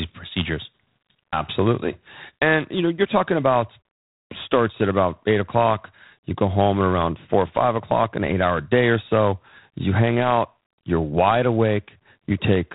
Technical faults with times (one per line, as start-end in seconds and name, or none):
0.00-12.75 G.726 ADPCM